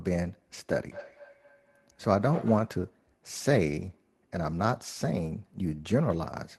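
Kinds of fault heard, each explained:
Feedback echo between two devices: from 0.85 to 2.81 s, a second device in the room replays the call, so sound returns roughly every fifth of a second, peaking about 15 dB below speech.
Lost packet rebuilt from error correction: at 0.99 s, 3.81 s and 5.29 to 5.35 s, missing audio is filled from low-bitrate copies carried in the following packet, leaving brief rough, noisy patches without any gap.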